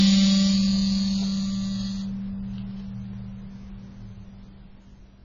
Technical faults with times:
0.00-5.25 AAC compression

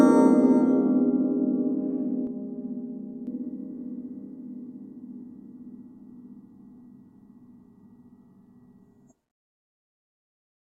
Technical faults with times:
2.27-3.27 channel delay (comb filtering)

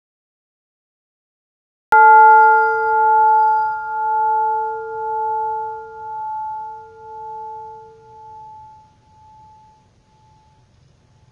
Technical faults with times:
0.00-11.32 AAC compression
0.00-1.92 cut-off start

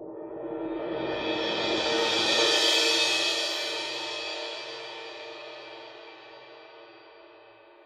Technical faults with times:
none

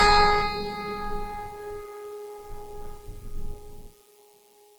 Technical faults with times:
0.00-4.78 generation loss

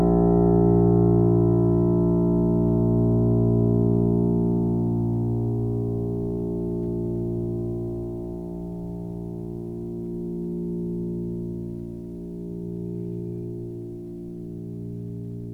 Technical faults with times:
none

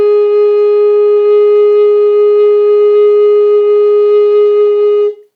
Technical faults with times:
none

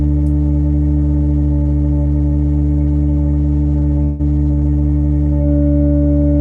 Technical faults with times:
4.03-4.21 long network dropout

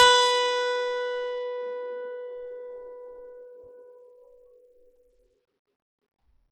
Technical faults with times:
0.00-6.51 Bluetooth SBC compression

